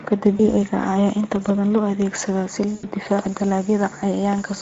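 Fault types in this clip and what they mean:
Speex codec: Across the whole clip the speech sounds noisy and hoarse, and the damage is plainly audible. This comes from Speex, a CELP speech codec from older VoIP and game chat, which models the voice as a filter driven by a coded excitation. The roughness points to a middle quality setting, around 17 kbps, where the excitation gets too few bits to carry the voice cleanly.
VoIP packet loss concealed by the speech codec: Twice the speech briefly stretches into a fading sound: a short blip at 0.37 to 0.40 s, and a longer stretch from 2.75 to 2.85 s right after "badan loo adeegsadaa si". The decoder filled missing packets by repeating its last pitch and filter at falling gain. The second gap, about 80 ms, fits four 20 ms frames, so the voice stays weakened past its end.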